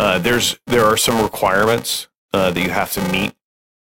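Throughout the speech, a filter restarted on every block, forgetting its state and starting each block from silence. Each block opens with a small transient, so a buzz at about 345 Hz runs under the speech and rises and falls with its level, which fits a 128-sample block.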